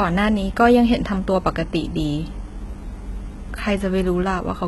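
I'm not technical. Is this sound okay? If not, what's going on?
No. Throughout the whole clip the speech carries what sounds like heavy HE-AAC compression, a likely cause given how the top end behaves. This kind of compression keeps only the lower part of the sound properly and fakes the treble by copying lower tones upward. So the s sounds come out gritty, metallic or lispy, and nothing at all is left above about 11.8 kHz.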